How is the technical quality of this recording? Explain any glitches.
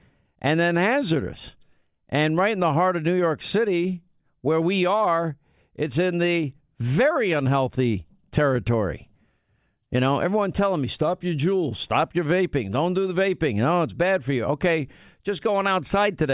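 Nothing in this speech recording stands out as a technical problem, so there aren't any glitches to explain.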